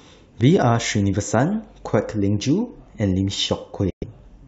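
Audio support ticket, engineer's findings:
Bluetooth dropout, 3.90–4.04 s: speech cuts to silence for about 116 ms, resumes mid-flow as if it had kept playing. Likely wireless link to headphones: packets arrived late and were discarded, which fits roughly five lost codec frames.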